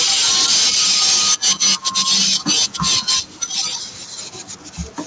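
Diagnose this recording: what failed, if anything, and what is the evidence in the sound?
The loudest syllables from the start to about 3.62 s carry a harsh, crackling edge, with peak tops flattened. Roughly a tenth of the samples were clipped. This is microphone overload at the converter stage, likely from input gain set about 12 dB too high. Unlike codec distortion, it tracks level, not spectral content, and it stops at about 3.62 s. The audio's band limit near 8 kHz fits a wideband call codec such as G.722 and is separate from the clipping.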